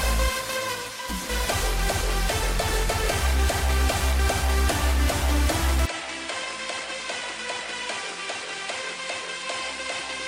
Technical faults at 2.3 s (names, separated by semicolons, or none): none